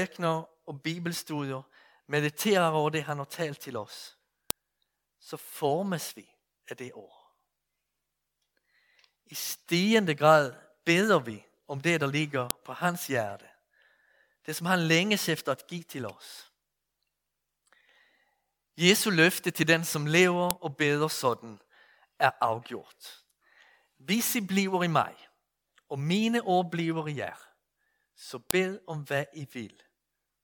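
Speech clip in which WAV pieces were joined without stripping their headers (file header played as audio), so the header bytes sound as sharp clicks every 8 s: at 4.51 s after "har talt til oss", 12.51 s, 20.51 s and 28.51 s.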